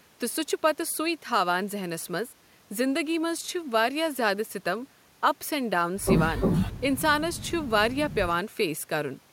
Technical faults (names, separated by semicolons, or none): none